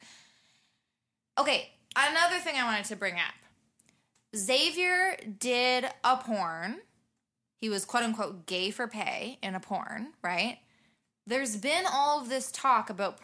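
No technical faults can be heard anywhere in this speech recording, so there is nothing to describe in time order.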